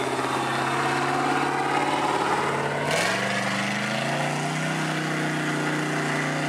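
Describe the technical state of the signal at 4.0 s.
At 4.0 s the signal is intact, with no dropout, distortion, glitch or other technical fault audible at that moment.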